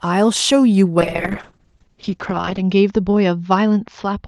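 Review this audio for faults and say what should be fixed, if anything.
A call bitrate drop starts at 1.0 s and lasts to the end. The speech turns coarse and muffled. Bandwidth narrows from 12 kHz to 8 kHz. The sound fits Opus falling from about 40 kbps to around 7 kbps, bottoming out for 1.6 s. To prevent it, set a higher minimum bitrate and check the network path that triggers the drop.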